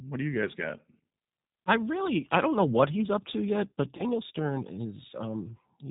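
G.729 codec throughout: the speech is rebuilt from a vocal tract filter, pitch predictor and sparse pulses, leaving it band-limited below 4 kHz, rough and synthetic, consistent with 8 kbit/s coding. VoIP packet loss concealed by the speech codec, from 3.97 to 4.03 s: about 20 ms went missing, which fits one lost packet, and the decoder extended its last pitch and filter into a brief buzzy or noisy, fading stretch that leaves the speech weakened for a moment after.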